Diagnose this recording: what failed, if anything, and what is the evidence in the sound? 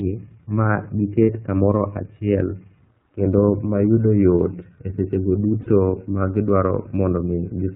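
The codec stage is at fault: the whole recording has passed through the iLBC codec, and the damage is plainly audible. The speech is narrowband, with nothing above 4 kHz, and has a slightly rough, synthetic grain because each frame's excitation is coded on its own. The roughness fits a 13.33 kbps, 30 ms frame mode. On a spectrogram, energy stops flat at 4 kHz across the entire file, with harmonics looking smeared rather than clean.

Lost iLBC frames at the network stage cause two short dropouts, at 1.22 to 1.30 s and at 5.61 to 5.67 s, just after "mayudo yot e sechego". Each spans about 60 ms, which points to two consecutive lost packets. The decoder fills the gap by repeating the last pitch cycle mixed with noise, so it sounds like a held, faintly buzzy vowel. Clean speech returns almost at once. The waveform shows a short stretch of regular repeated periods, and the spectrogram shows flat, frozen harmonic bands.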